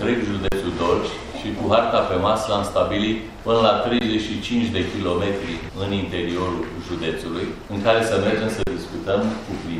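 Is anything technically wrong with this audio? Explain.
Yes. There are three underruns with held sample, at 0.48 to 0.52 s, 3.99 to 4.01 s, and 8.63 to 8.67 s. The first and last last 40 ms, the middle one 20 ms. Each time the output buffer ran dry, and the converter held its last value. The sound freezes into a flat, silent step with little or no click as it stops. Roughly as much audio as each gap is lost, so the sound resumes further along.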